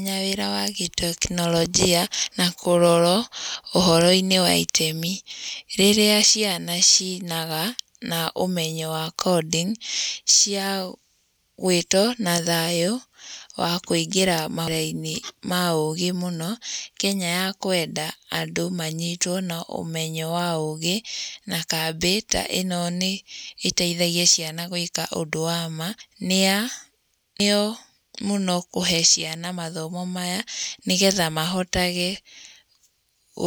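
A speech recording with four abrupt forward jumps, at 2.23, 14.68, 26.01 and 27.40 s. Each is a point where the sound skips ahead, losing roughly a tenth to a third of a second. The likely cause is a dropped buffer (overrun), where unread samples were overwritten and the surviving audio spliced together. Unlike an underrun, there is no silent gap or stutter at the join, only missing material.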